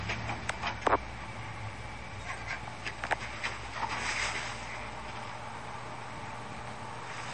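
Throughout, the sound is watery and swirly, with smeared attacks and nothing above 10.5 kHz. The likely cause is MP3 compression at a low bitrate, around 40 kbps. A spectrogram shows a hard ceiling at 10.5 kHz and weak detail flickering between frames.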